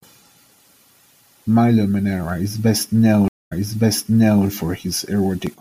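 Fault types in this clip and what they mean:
Periodic USB or driver dropouts: something stalls the audio path once a second, dropping about half a millisecond to silence, so you hear roughly three ticks.
Stream reconnect: the connection drops for 228 ms, then a fresh decoder picks up the speech 940 ms earlier, so a chunk repeats.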